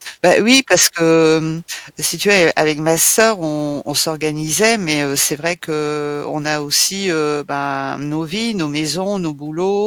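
A stage in this speech clip was overdriven by about 4 dB from 0.24 to 0.85 s, just before "que mmh si tu", and by about 3 dB from 2.30 to 2.60 s, right after it. This hard clipping flattens the peaks, so those passages crackle on their peaks.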